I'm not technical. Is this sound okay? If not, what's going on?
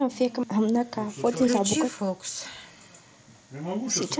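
Yes, no faults here.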